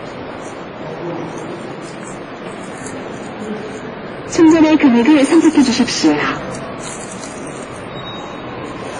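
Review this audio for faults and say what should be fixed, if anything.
Transcoding between lossy codecs runs through the whole clip. Nothing sits above about 10.6 kHz, and the audio carries two layers of artefacts at once, the different codecs' artefacts heard together. The likely cause is a WMA encode re-encoded to Vorbis, each at a low rate near 30 kbit/s. The second codec wasted bits reproducing the first one's damage and added its own, while the lowest cut-off in the chain remained. To prevent this, encode once from the original uncompressed source at an adequate bitrate, never from an already-compressed file.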